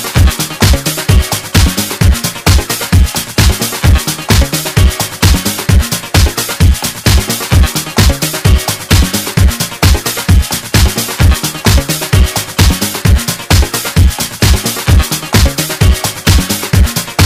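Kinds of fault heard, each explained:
Hard clipping: the signal is driven about 8 dB past what the chain can pass, so every peak is sliced flat at the ceiling, and around 7 percent of the waveform sits pinned there across the whole clip. Those squared-off tops throw harsh harmonics high into the spectrum, heard as a gritty fuzz riding each loud moment. Unlike soft saturation or a limiter, the edges are abrupt and buzzy rather than rounded or pumping.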